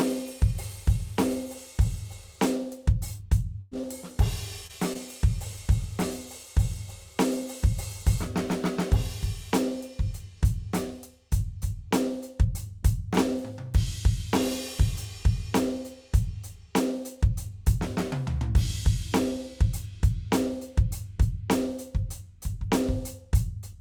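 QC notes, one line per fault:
3.17–3.21 s, 3.81–3.85 s, 4.67–4.71 s and 4.93–4.97 s: short concealed packet loss. Each is a brief smear or wobble in the music. About 20 ms of audio never arrived in time, so the receiver extended the preceding sound to cover it and then blended back into the real signal.
3.61–3.73 s: burst of packet loss. The music briefly turns into a held, fading continuation with no dropout to silence, then jumps ahead. Roughly 100 ms of consecutive audio was lost, and the receiver stretched the last sound across the hole, so that stretch of music is gone.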